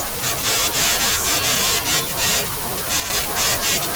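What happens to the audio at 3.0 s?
A sudden gain jump: from 3.0 to 3.1 s the speech and background noise drop together by about 8 dB, likely from a gain change applied without a ramp. The waveform shows an abrupt envelope step at each edge.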